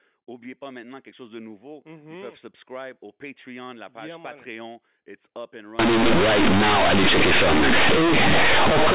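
From 5.79 s, right after "up and", the mu-law telephone bytes are played as linear 8-bit samples, a case of companded audio read as linear. Because nothing expands them, small values near zero leap across half the range. Quiet passages become as loud as peaks, producing harsh, buzzy distortion and loud noise in gaps until the end. Simple clipping would spare the pauses. Before this, the band stops at 4 kHz, as telephone coding should.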